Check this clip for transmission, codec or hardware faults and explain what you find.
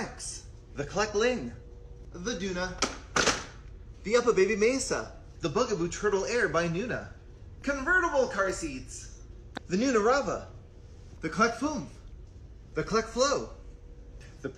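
No transmission, codec or hardware faults.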